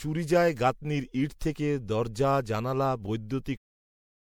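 Right through the speech there's a swirly, hollow smear with blurred attacks, likely generation loss from a few rounds of lossy MP3 coding at what sounds like roughly 96 kbit/s, each pass piling up fresh noise. Nothing sits above 20.9 kHz, and the smooth fade-out from about 3.5 s to 3.58 s carries the same wash.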